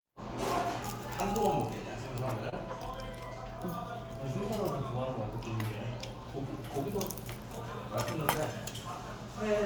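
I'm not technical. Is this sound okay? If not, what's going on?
No. At about 2.49 to 2.54 seconds there is a short concealed packet loss. A tiny piece of the audio arrived too late. The receiver patched the gap by stretching the sound just before it. You may hear a quick smear or wobble.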